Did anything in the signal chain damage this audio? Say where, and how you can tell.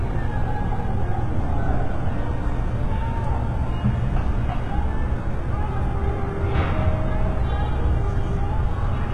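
Yes, the damage comes from the codec stage, most likely HE-AAC compression at a very low bitrate, around 16 kbps. Throughout the clip nothing remains above 11.7 kHz, and the upper band sounds gritty and metallic. That treble is spectral band replication, lower bands copied upward and shaped only by a coarse envelope, so its harmonics no longer line up with the coded content below, and the artefacts are heavy.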